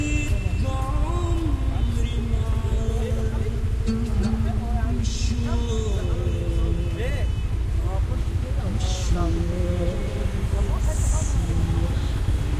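Recording of everyday sounds; no technical faults detected.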